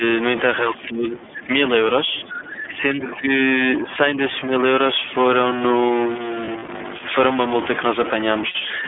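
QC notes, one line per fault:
throughout: stuck bit. Distortion rides on all the audio and leaves a hiss in the pauses, likely from one converter bit stuck high or low.
throughout: iLBC codec. The audio is narrowband, 200 Hz to 3.5 kHz, and coded in 30 ms frames that fit the 13.33 kbps mode, which makes it plainly rough and synthetic.
0.62–1.5 s, 2.11–2.78 s, 2.95–3.3 s, 3.8–3.87 s, 4.47–4.52 s: speech suppressed in double talk. The level dips by about 15 dB at first, then about 10 dB, then about 5 dB in the short ones. The likely cause is an echo canceller ducking the talker while the far end talks.
2.44–2.59 s: other side's voice leaking through. A faint second voice, about 30 dB below the talker, is likely echo from the loudspeaker that the canceller left behind.
6.45–6.69 s and 8.49–8.56 s: lost iLBC frames. There is 90 ms of concealment scattered across the first span and 60 ms in the second, which fits three and two lost 30 ms frames. 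Each gap is a held, buzzy, repeated pitch cycle that recovers at once.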